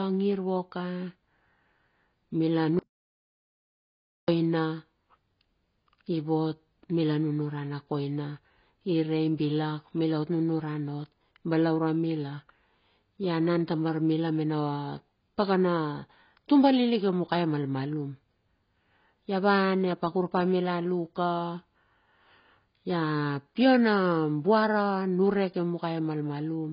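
From start to finish the speech sounds dull and smeared, with nothing above 5.1 kHz and a warbling, fizzy texture on sustained sounds and sibilants. This is likely heavy AAC compression, AAC-LC at a bitrate that fits around 16 kbps, which discards high frequencies and thins the spectrum.

At 2.79 s the audio cuts out to complete silence with no room tone, returning at 4.28 s after about 1.49 s of missing material. This audio dropout to silence is likely lost input while recording continued, writing silence.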